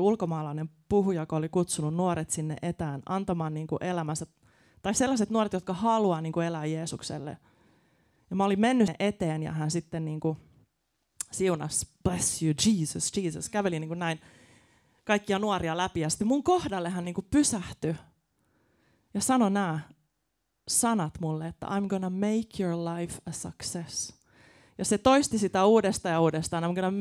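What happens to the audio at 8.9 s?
At 8.88 s there is a tiny tick with a mute of just a few milliseconds, between "mä olin mennyt" and "eteen ja hän sitten", and the speech resumes from a different point rather than carrying on smoothly. This is a CD skip: a knock or a flaw on the disc threw the laser onto another turn of the spiral, so the player silenced briefly and picked up the track from another place.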